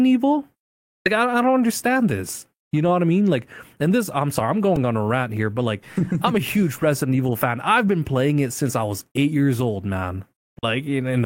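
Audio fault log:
4.76 s, repeated buffer: just after "this I'm sorry I'm", a 1.33 ms piece plays four extra times, making a click or brief buzz.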